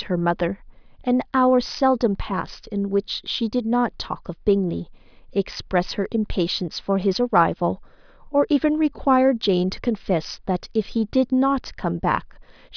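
Listening to this speech recording, nothing technical stood out at any point.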